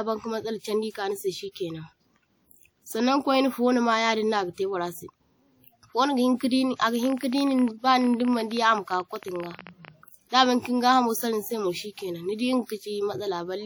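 From the start, the speech carries plainly audible transform-codec damage, likely WMA compression at a bitrate consistent with about 48 kbps. At that rate the encoder's long transform blocks smear quantisation noise over tens of milliseconds around each sound, and weaker spectral components are discarded entirely. The result is a ringing, washy quality, with a hiss that swells and recedes along with the level of the voice.

Between 7.03 s and 9.89 s a train of clicks sits over the audio: about fifty similar short pulses, arriving at roughly 16.5 per second but with irregular spacing. Their peaks reach around 5 dB above the speech, and they are heard as a rapid, uneven ticking. The pattern points to a likely source in electrical interference or a faulty connection or power supply injecting spikes into the signal path for those few seconds.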